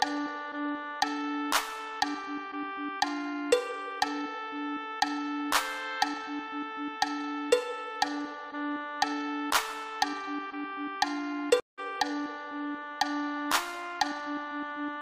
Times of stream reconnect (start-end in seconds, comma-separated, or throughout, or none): 11.60-11.79